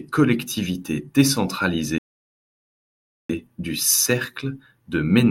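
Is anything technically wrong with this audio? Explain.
Yes. A rebuffering stall runs from 1.98 to 3.29 s: playback used up its downloaded audio and paused until more data arrived. The speech drops to silence for 1.31 s, then picks up exactly where it stopped, so nothing is lost but the clip runs longer.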